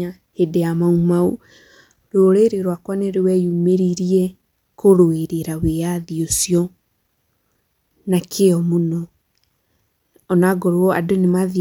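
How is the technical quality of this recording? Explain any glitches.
Nothing technical trips up this recording, so there aren't any glitches to explain here.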